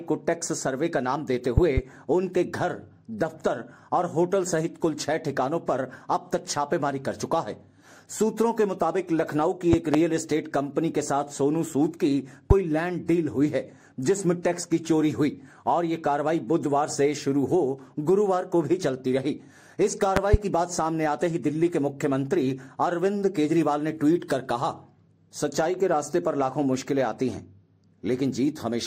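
Sharp, loud pops cut through the sound four times, each rising well above the level around it. A double pop spans 1.58 to 1.80 s, roughly 20 dB above the signal. Another pair, a little softer at around 15 dB, falls between 9.73 and 9.97 s. A single pop lands at 12.51 to 12.53 s, and a final pair runs from 20.17 to 20.36 s, both again near 20 dB. The sound continues underneath each one. These are loud pops, likely from sudden voltage steps or pulses from a plug, switch, static discharge or driver glitch, which the downstream circuitry shapes into these brief bursts.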